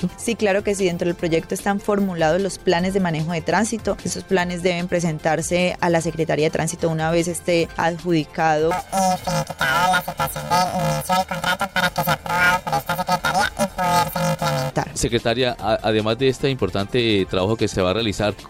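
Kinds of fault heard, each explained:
Planar audio read as interleaved: from about 8.71 to 14.71 s the sound becomes a harsh, robotic buzz pitched at 375 Hz, with no clear octave jump. Each 2.67 ms block, which fits a 128-sample block, stores all its left-channel samples followed by all its right-channel samples, but it is read as alternating left-right pairs. Each block therefore plays its two halves back to back at double speed. With blocks this short, that repetition sounds like a buzz at the block rate rather than an upward pitch shift.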